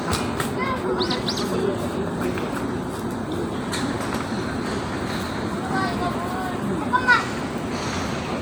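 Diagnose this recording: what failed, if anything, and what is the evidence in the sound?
Nothing failed at any stage: every point from capture to playback presents intact, with no audible defect in the recording of these sounds.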